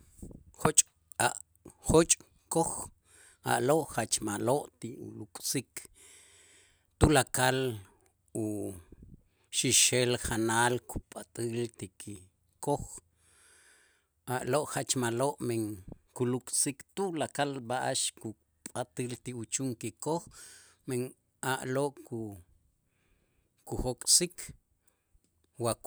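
Listening to the speech recording, nothing stood out as a technical problem at any point.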